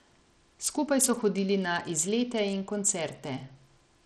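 From start to finish the speech carries plainly audible codec damage: the treble thins out and flickers, with a gritty, aliased edge over everything. That's most likely Bluetooth SBC compression at a starved bit allocation, consistent with roughly 80 kbps, leaving the top sub-bands short of bits.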